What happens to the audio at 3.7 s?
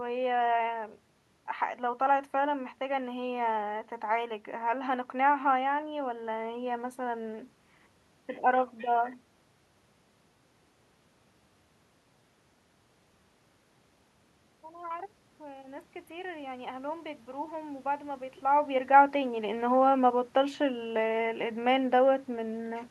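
At 3.7 s the audio carries the DC offset that runs through the whole speech clip. The waveform sits shifted off zero by a constant amount, so you won't hear it directly, but it eats headroom and shows up as steady energy at the very bottom of the spectrum.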